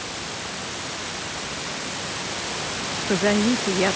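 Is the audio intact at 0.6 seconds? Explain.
Yes, the audio is intact at 0.6 seconds, with the speech running cleanly through the call path at that moment and no dropout, glitch or distortion to be heard.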